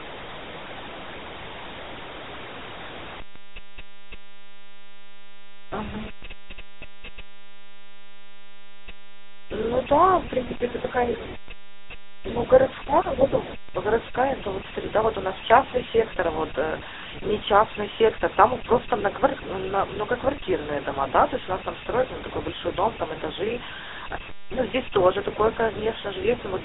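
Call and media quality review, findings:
GSM full-rate codec: buzzy, gravelly speech throughout, band-limited to roughly 300 Hz to 3.6 kHz; coarse pulse-driven vocal-tract model, consistent with a 13 kbps GSM full-rate stage.

One channel inverted: from 3.2 s to the end, speech drops by about 27 dB, faint; likely reversed polarity on one channel cancelling the centred signal at mono downmix.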